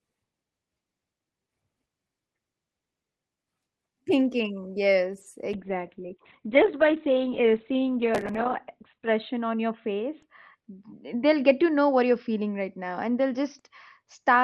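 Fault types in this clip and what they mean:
call bitrate drop: Right after "thinking yes", around 5.5 s, the call's bandwidth estimate falls and the encoder gets squeezed from 32 kbps down to 10 kbps, staying at the bottom for a good 3.7 s. At that rate the codec works much more coarsely and trims the audio band from 20 kHz to 4 kHz, so the speech goes muffled and a bit watery and doesn't clear before the end of the clip.
processor overload crackle: At about 8.15 s, for roughly a quarter of a second, the processor can't keep up and misses a whole string of audio buffer deadlines. Each missed buffer is simply skipped, leaving a tiny hard-edged gap, and the run of them, which fits something like fifteen 10 ms buffers, comes across as a short burst of gritty crackle riding on the speech until the load eases around 8.41 s.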